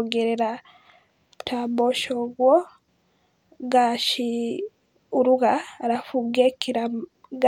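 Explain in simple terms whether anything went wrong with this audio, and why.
Nothing went wrong with this recording of speech. No faults can be heard anywhere in it.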